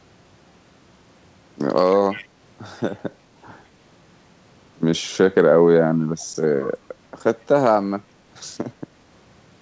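From 1.92 to 2.27 s a faint delayed copy of the speech trails the original by about 146 ms, roughly 20 dB below it. At 6.19 to 6.25 s a much quieter scrap returns at the same delay. This is echo leak, likely from a far-end speakerphone whose echo canceller let residue back. Unlike room reverb, the repeat is a discrete copy at a fixed lag rather than a smooth decay. Like the rest of the audio, it stops at 8 kHz.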